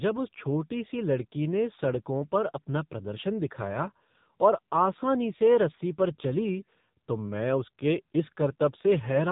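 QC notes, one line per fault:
Throughout: AMR narrowband mobile codec. Nothing above 3.8 kHz survives, so the speech sounds thin and boxed in. It is heavily damaged, buzzy and synthetic, rebuilt from a vocal-tract model and a few pulses per frame. This fits a low mode near 6.7 kbps.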